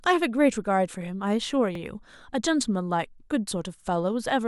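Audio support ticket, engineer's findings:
Overlapping chunks: stutter at 1.75–1.80 s and 3.80–3.85 s, 50 ms replayed at each join, 2 s apart. Chunking/streaming stage starts each 2 s block 50 ms early. Material repeats rather than drops out, unlike buffer underrun gaps.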